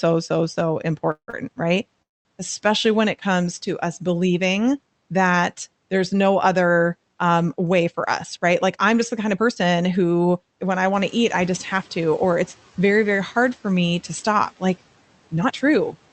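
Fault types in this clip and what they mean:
Call audio freeze: After "so so" at 1.11 s, and again at 2.02 s, the sound trails off as a fading buzz into silence for about 90 ms and 200 ms, adding gaps of 167 ms and 230 ms with nothing lost. The likely cause is delayed packets emptying the jitter buffer. A spectrogram shows the last frame smeared, then a blank band. The waveform flattens.
Short stall from a late packet: Right after the first freeze, from 1.30 to 1.35 s, a sound is held 30 ms too long while the receiver waits for a missing packet, then resumes without loss. The spectrogram shows briefly frozen, stretched harmonics. The waveform shows a small dip in level.
Jitter buffer speed-up: From 7.57 to 9.82 s, between "there's no other um" and "who when I", speech runs at 110% speed, and from 15.37 to 16.09 s at 116%. Roughly 200 ms and 100 ms of pitch-period slices are dropped, so it sounds hurried. 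Harmonics keep their spacing while syllables compress in time.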